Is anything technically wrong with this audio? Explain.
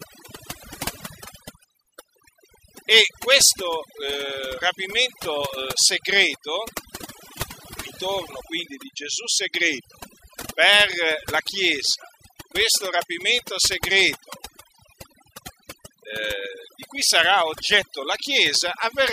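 Yes. The speech suffers from overdone noise removal, and it lasts the whole clip. A noise reduction stage was pushed too hard. Any frequency band sitting near its noise estimate is cut deep or muted outright, and the softer parts of the voice fall into that range too. The pauses drop to near silence scattered with twinkling specks. On a spectrogram the gaps show as dark regions dotted with isolated bright blips. The upper harmonics of the voice look patchy and eaten away.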